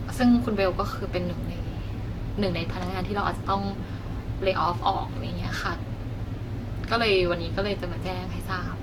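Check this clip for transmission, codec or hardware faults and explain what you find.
One codec fault runs through the whole speech clip: generation loss. From start to finish the speech has a swirly, smeared, hollow quality, consonant attacks are blurred, and nothing is present above 17.7 kHz. The damage is heavier than a single moderate-rate encode would leave, and the character suggests Vorbis near 68 kbit/s. The likely cause is about four successive decode and re-encode passes, each quantising on a shifted frame grid so that noise and spectral gaps accumulate.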